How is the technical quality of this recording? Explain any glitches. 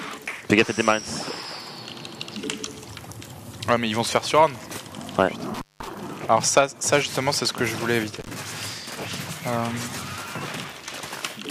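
The recording has an intermittent contact fault that breaks the signal twice. At 5.54 to 5.88 s, with the line open for about 189 ms, and again at 8.20 to 8.29 s, for about 57 ms, a loose cable or plug briefly loses connection. The sound drops out, leaving faint hiss, with a crackle as the contact breaks and remakes.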